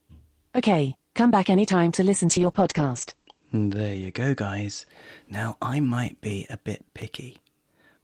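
Just after "back anytime to listen", from 2.28 to 4.95 s, a call bitrate drop makes the speech coarse and muffled as the top end narrows to about 8 kHz, consistent with the encoder falling to around 11 kbps, worst for 1.04 s. Unlike packet loss, nothing drops out.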